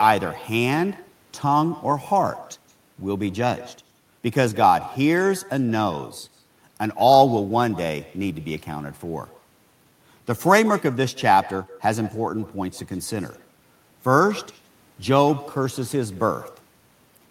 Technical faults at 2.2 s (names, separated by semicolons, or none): echo with no canceller